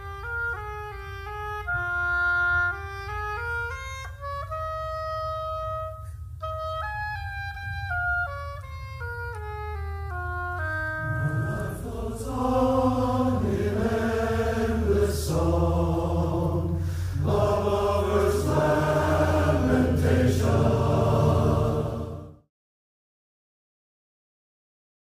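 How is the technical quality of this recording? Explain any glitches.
No glitches to report; the only level change is a smooth fade-out that begins around 21 s and reaches silence at 22.51 s, with no click or hard edge.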